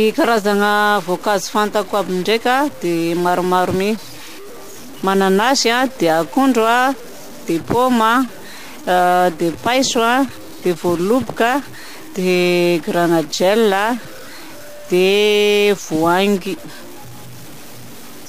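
From start to finish, the speech carries a harsh, buzzy distortion that rides on every syllable, and the pauses between phrases are filled with a gritty noise floor instead of silence. This is the signature of a stuck bit, likely one data bit held at a fixed value by a faulty converter or data line. Roughly half the samples are offset by a step of about -30 dBFS, so the error follows the waveform, and near-zero values flipping sign keep the gaps noisy.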